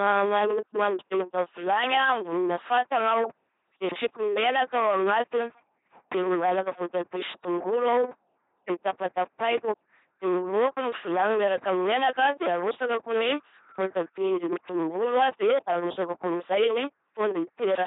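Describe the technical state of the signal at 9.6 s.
At 9.6 s you're right at the tail of a burst of processor overload crackle that runs from 9.25 to 9.6 s. The machine kept missing its deadlines for small audio buffers, about 10 ms each, and each miss dropped to silence. That's a handful of hard-edged gaps in a row, heard as gritty tearing that stops right about here.

Under that, the whole clip has hard clipping. The speech is pushed about 9 dB past what the chain can pass, so a good share of the peaks get sliced flat. Those squared-off tops spray harmonics upward, giving a harsh fuzz on the louder syllables.

The speech also carries heavy LPC-10 vocoder damage, with nothing above 3.8 kHz, which fits a 2.4 kbit/s LPC-10 coder. Each moment is forced to be either a buzzy pulse-driven sound or pure hiss through a simple vocal-tract filter, so it comes out as that mechanical robot voice.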